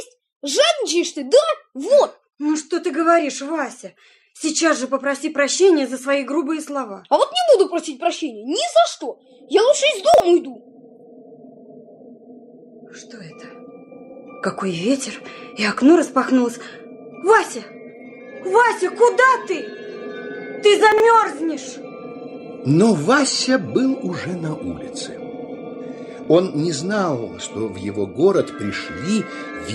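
You'll catch three quick jumbled moments in the sound, at 10.14 to 10.2 s, 20.92 to 21.0 s and 26.24 to 26.28 s. That's chunks out of order: 20 ms blocks landing late by two, three and one chunk, so nothing's lost but the sequence scrambles and leaves hard joins.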